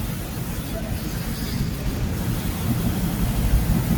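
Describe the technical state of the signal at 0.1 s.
At 0.1 s the speech signal is intact, with no audible fault at that moment.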